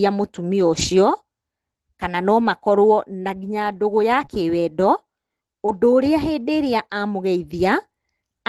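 At 0.73 to 0.83 s, 2.43 to 2.45 s and 4.13 to 4.23 s the sound turns briefly grainy and rough: each is a lost packet rebuilt from error correction. The frames never arrived, so the decoder played the low-bitrate copy carried in the following packet. There is no gap, but the substitute is coarser. On a spectrogram these spans show smeared harmonics and a raised noise floor. The waveform stays continuous, with its fine detail blurred.

At 4.25 to 4.29 s and again at 5.66 to 5.70 s there is a short concealed packet loss. About 20 ms of audio arrived too late, and the receiver extended the preceding sound to bridge the hole before crossfading back. It is heard as a quick smear or wobble. A spectrogram shows a frozen, repeated stretch of harmonics or diffuse noise. The waveform shows a copied cycle pattern fading into the real signal. At 5.68 to 5.70 s the end of that second hole overlaps a rebuilt packet, which roughens the texture further. 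Throughout, the call path's Opus coding limits the content to about 12 kHz, which fits a bitrate of around 24 kbps.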